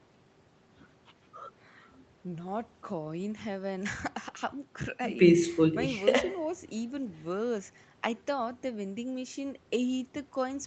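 No technical faults are audible.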